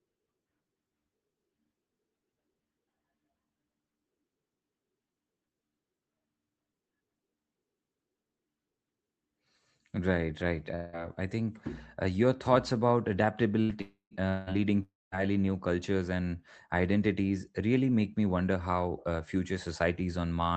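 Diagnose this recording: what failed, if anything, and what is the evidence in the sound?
Network stage, likely long network dropout: speech is replaced by fading concealment at 10.75–10.96, 13.81–14.14, 14.29–14.50 and 14.83–15.15 s, with silence by the second and fourth. The speech then resumes with about 180–300 ms lost each time.

Burst of packet loss, network stage: at 13.63–13.72 s the receiver stretches the last sound into a fading tail, then resumes with about 60 ms of speech skipped.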